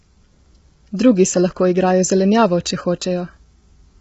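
Throughout the speech, the voice sounds rough and grainy, with a hiss-like fill between the harmonics and nothing above 7.8 kHz. This is likely low-delay AAC compression: short frames resolve pitch poorly, and the heavy damage points to a bitrate around 16 kbps. On a spectrogram, the harmonic stripes look smeared and blotchy with noisy gaps between them, and there is a hard ceiling at 7.8 kHz with empty space above.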